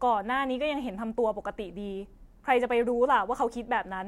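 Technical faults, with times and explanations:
No technical faults are present, so there are no times or explanations to give.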